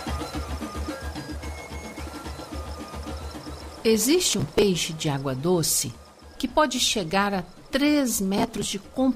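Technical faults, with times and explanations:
4.29–4.63 s and 8.38–8.64 s, processor overload crackle: the processor falls behind and misses a long run of deadlines for its tiny buffers, which sound to be around 5 ms each. Each missed buffer is skipped outright, leaving a hard-edged gap, and dozens of these together make a gritty crackling tear that stops once the load eases.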